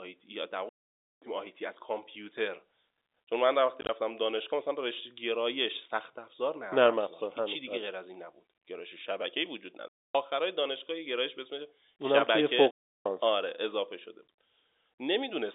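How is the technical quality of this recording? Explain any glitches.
The recording has two kinds of glitch: three clean mutes from a wireless link and one short patch of chopped-up sound from lost network packets. It all sits inside a narrow telephone band, consistent with G.711 coding, with nothing above roughly 3.7 kHz.

Digital wireless dropout, at 0.69 to 1.22 s, 9.88 to 10.15 s and 12.71 to 13.06 s. Each time, the radio link lost more data than the receiver could repair, so it muted rather than play corrupted audio. The gaps last about 0.53 s, 0.26 s and 0.35 s. Each is a clean hole of near silence with a quick fade and no noise burst on either side, so the sound simply vanishes and returns.

Packet loss filled with silence, from 3.81 to 3.89 s. Packets failed to arrive, and the receiver inserted silence in their place. About 50 ms of audio is missing, scattered across 80 ms, with no single gap longer than 20 ms. 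That spacing fits packets of roughly 10 ms each. The result is a brief stuttering chop, with hard edges where the audio cuts in and out.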